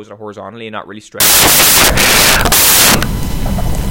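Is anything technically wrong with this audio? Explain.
Yes. From 1.20 s to the end of the clip at 3.91 s, the speech turns into samples built from the wrong bytes. The reader assembled each sample from mismatched bytes, whether shifted by one, reversed in order, or misaligned, so the rapidly fluctuating low-order bits landed in the most significant position. What had been speech becomes loud, harsh broadband noise for the rest of the clip, close to white on the louder passages.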